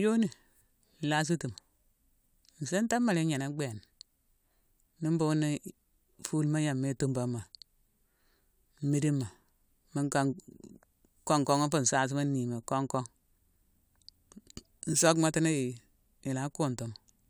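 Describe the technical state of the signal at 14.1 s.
At 14.1 s the speech signal is intact, with no technical fault present at that point.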